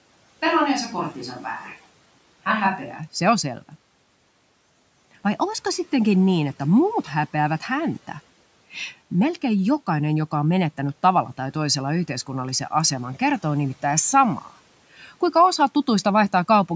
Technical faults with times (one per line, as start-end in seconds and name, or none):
0.00-2.97 switch to a distant microphone